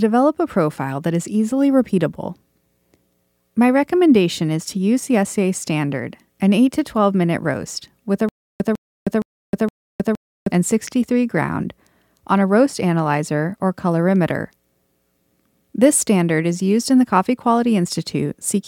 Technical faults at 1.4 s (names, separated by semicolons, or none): none